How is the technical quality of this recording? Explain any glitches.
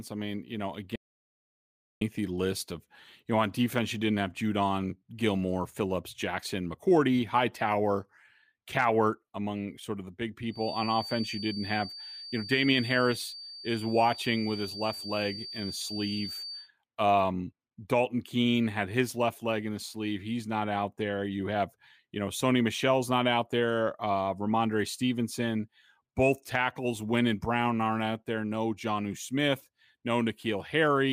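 The recording has two clear faults. One is an early gap. The other is a whistle in the middle.

From 0.96 s to 2.01 s there is an audio dropout to silence. The speech cuts off abruptly. About 1.05 s of silence follows, with no room tone. The input was likely lost while recording continued. Whatever was spoken there is gone.

From 10.47 s to 16.71 s a feedback whistle sits behind the speech. It is a thin, steady tone at 4.6 kHz, about 15 dB below the speech. Its level swells and fades slowly. The loudspeaker-to-microphone loop was likely held just short of runaway feedback.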